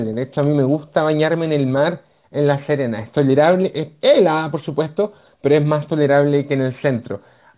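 Speech recorded at a high rate was downsampled with no anti-aliasing filter, pointing to a drop from 48 kHz to 8 kHz. Throughout, energy above the 4 kHz fold point mirrors back as aliasing, roughly 20 dB under the speech, making sibilants gritty and metallic.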